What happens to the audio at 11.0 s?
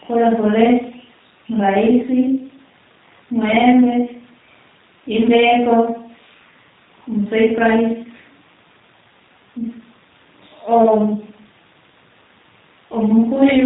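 At 11.0 s the speech is still carrying the G.729 codec coding that runs through the whole clip. The codec rebuilds each 10 ms frame from a vocal tract filter, a pitch predictor and a few sparse pulses, so the waveform is modelled rather than preserved. Nothing above 3.8 kHz survives, leaving the sound muffled and band-limited, with a plainly audible rough, synthetic texture that fits an 8 kbit/s stream.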